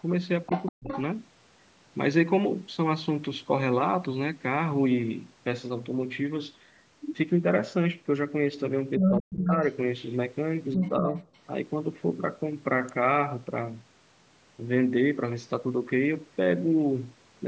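Speech recorded over a call, with three kinds of trouble. A second voice leaks in under the talker at 0.46 to 1.02 s, then again at 8.98 to 9.7 s and 10.74 to 11.27 s, first well below the main voice, then roughly as loud or louder. This is likely the other side's voice leaking through: the far end played on a loudspeaker and the echo canceller left part of it in the microphone signal. Overlapping these same moments, the talker's own voice sags or breaks up, from 0.48 to 0.9 s and 8.98 to 9.52 s with drops as deep as about 40 dB across roughly a fifth and then half a second in total, and only slightly, by about 5 dB, from 10.76 to 11.15 s. That pattern is likely speech suppressed in double talk, where the canceller, faced with both sides talking at once, turned down everything rather than separating the talker from the echo. At 12.89 s a single sharp snap sits on top of the audio, a momentary arc picked up on the line and likely an electrical switching spike from a nearby switch, motor or static discharge. 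The top end stops at 8 kHz, in line with the call's microphone processing.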